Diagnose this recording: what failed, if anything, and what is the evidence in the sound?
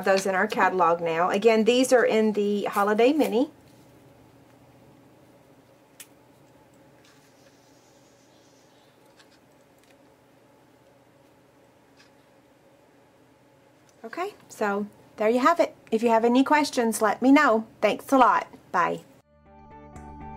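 Nothing failed, and the sound gives no evidence of any fault.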